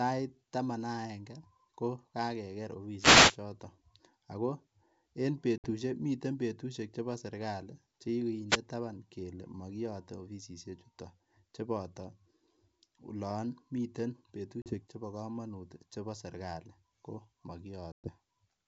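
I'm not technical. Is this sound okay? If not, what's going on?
No, there are two kinds of glitch in this speech.

First, wireless microphone noise hits: around 2.98 to 3.38 s, and again briefly at 8.49 to 8.58 s just before "taban kele mokiyote offisisiek", you get a quick swish of static. The radio mic's signal momentarily faded, so the receiver's hiss swelled up over the voice.

Second, packet loss on an ADPCM call: at 5.58 to 5.70 s (right before "miten betushek chebo serikali"), 14.62 to 14.80 s (between "olon miten" and "chebo komonut chebo serikali"), and 17.92 to 18.10 s, chunks of the call dropped out. Those gaps were about 60, 40 and 120 ms, likely about 3, 2 and 7 packets' worth. Each leaves a sharp-edged silent hole, and the voice comes back slightly distorted before settling. That happens because the decoder briefly loses track of the sender.

The G.722 wideband phone coding itself is clear, with at most a faint hiss up top.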